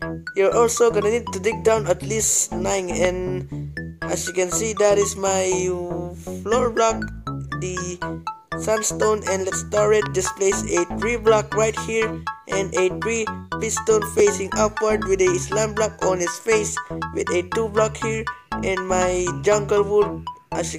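At 3.05 s there's a single loud pop that jumps well above the sound. Then from 10.06 to 10.27 s comes a softer pair in quick succession. Each is likely a voltage spike from a switch, plug or static, with the sound carrying on underneath.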